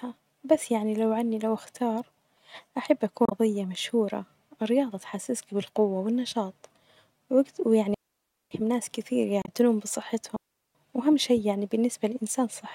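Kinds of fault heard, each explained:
Damaged data in a compressed stream: corrupted bytes in the encoded stream make the decoder misread frames, lose sync and hunt for the next valid frame header. The result is a short glitch lasting about 70 ms, once at 3.25 to 3.32 s just after "أحب أكون" and again at 9.42 to 9.49 s just after "ناس كتير". This misreading of damaged frames sets it apart from the clean mutes of the dropouts.
Digital wireless dropout: when the radio link loses too much data, the receiver mutes the audio behind a very quick fade instead of passing on errors. The speech drops to near silence for 570 ms from 7.94 to 8.51 s, ending just before "ناس كتير", and again for about 385 ms from 10.36 to 10.75 s. No noise burst or chirp comes before or after either hole, which separates these from stream corruption.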